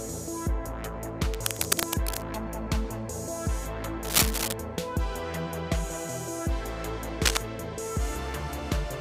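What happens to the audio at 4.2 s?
Cable scratch noise runs from 4.05 to 4.54 s, likely from a worn cable or connector being moved so its contact resistance flickers. Dense, uneven bursts of scratching and rustling sit over the sound, a little louder than the sound itself, for about half a second.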